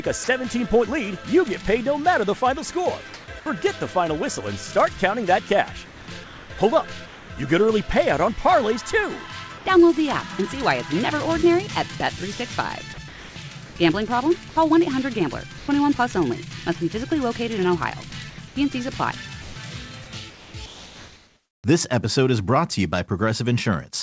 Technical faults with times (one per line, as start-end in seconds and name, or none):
0.24-0.28 sound dropped by the voice detector
3.14-3.28 comfort noise in place of the background
5.86-7.30 comfort noise in place of the background
9.58-9.66 comfort noise in place of the background
12.94-12.98 sound dropped by the voice detector
12.94-13.76 comfort noise in place of the background
15.58-15.68 comfort noise in place of the background
18.30-21.64 comfort noise in place of the background